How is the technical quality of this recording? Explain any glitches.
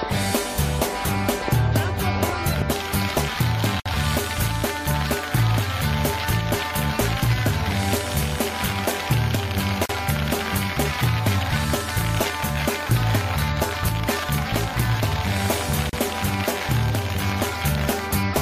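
The recording has a recurring glitch: three short dropouts spaced 6 s apart.

Gap at a join of encoded pieces, at 3.80 to 3.86 s (about 58 ms), 9.86 to 9.89 s (37 ms) and 15.89 to 15.93 s (37 ms). The audio was encoded in separate pieces and joined without trimming, so each piece's encoder start-up delay and padded final frame remain as silence. Continuous sound abruptly drops out, with smeared edges, then resumes exactly where it stopped.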